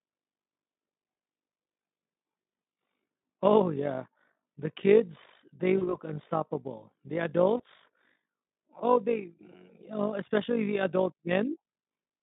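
Throughout the clip, overlap-add ripple makes the level swell and dip by about 11 dB around fifty times a second, because the frames were rejoined with an overlap that doesn't sum to constant gain. It sounds like a rough tremolo. The waveform envelope shows regular scalloping, and a spectrogram shows faint vertical striping at that spacing.

At 5.77–5.97 s, just after "kids they", VoIP packet loss concealed by the speech codec replaces about 40 ms of audio, which fits two lost 20 ms frames. The decoder keeps extending its last pitch and filter shape while lowering the gain, so the sound smears into a fading buzzy tone or coloured noise that stays weak after audio resumes. On a spectrogram this shows as a flat, smeared continuation within the narrow 150 Hz to 3.7 kHz line band, tapering in energy.

A shorter concealment at 7.57–7.64 s covers about 20 ms, consistent with a single lost frame. 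It is a brief concealed stretch with a dip and slow recovery in the waveform.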